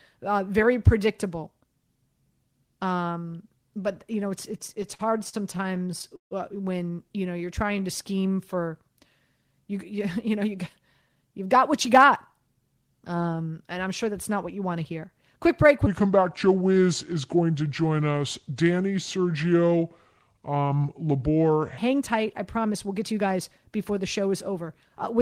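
From 4.51 to 6.33 s you get repeated stalls, a stutter: the jitter buffer kept running dry as packets showed up late, so the receiver stretched the last bit of sound across about 24 short gaps. That's 436 ms of filler, the longest 149 ms, with nothing actually lost, but it drags and hiccups.

Then at 7.15 to 8.55 s there's a jitter buffer slow-down. The buffer was low, so it padded itself by repeating pitch periods and slivers of pause, adding 121 ms. Speech runs at 92% speed, pitch unchanged, sounding a touch drawn out.

A jitter buffer speed-up follows at 10.44 to 12.82 s. Too much audio had piled up, so the receiver snipped out tiny pitch-period chunks, roughly a fifth of a second in total. It plays at 107% speed at normal pitch and feels rushed.

From 15.87 to 21.78 s a section plays at the wrong speed, 0.729 times the original, with pitch dropping together with tempo, around five semitones. 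The speech comes out deep and sluggish, likely from being played against the wrong clock.

Finally, another jitter buffer speed-up at 22.01 to 23.27 s, at 106% speed with about 70 ms trimmed, gives a brief hurried stretch.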